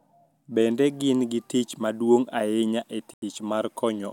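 Just after "ahinya e", the speech drops to silence from 3.14 to 3.22 s, then resumes, likely a Bluetooth stall where delayed packets emptied the headphones' buffer.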